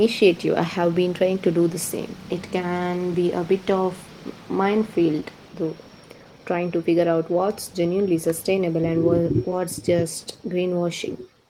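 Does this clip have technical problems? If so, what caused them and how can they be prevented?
Yes. Short concealed packet loss at 5.20 to 5.23 s and at 9.51 s: about 10 ms of speech arrived too late, so the decoder extended the preceding sound and blended it back in. On a spectrogram this appears as a brief smeared, frozen stretch. Larger jitter buffers and forward error correction would help prevent it.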